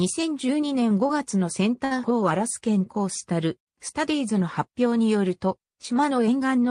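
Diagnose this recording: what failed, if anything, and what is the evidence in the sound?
A burst of packet loss on the network path runs from 1.85 to 1.93 s. The receiver holds and fades the last received sound for about 59 ms to conceal the gap, then playback resumes with roughly 60 ms of the original audio skipped.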